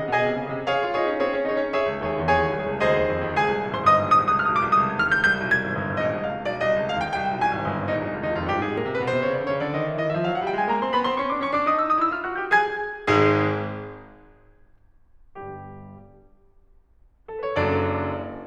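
At 2.80, 8.78 and 14.76 s, the music skips briefly, about every 6 s. About 20 milliseconds vanish each time. This is likely audio missing between chunks.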